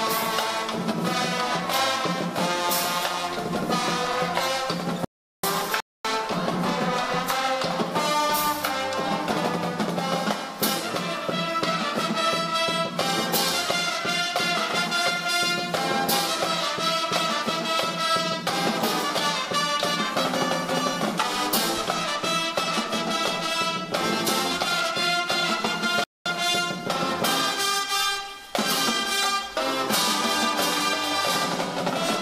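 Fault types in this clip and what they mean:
Audio dropout to silence: The input feed was most likely lost briefly while recording continued, writing silence. At 5.05 s the sound cuts off mid-flow into dead silence with no room tone, returning at 5.43 s, so about 0.39 s is missing.
Bluetooth stall: Interference likely delayed wireless packets, letting the headphone buffer run empty until retransmissions arrived. Playback halts into silence and then resumes, once from 5.80 to 6.05 s (about 0.24 s) and again from 26.04 to 26.26 s (about 0.22 s).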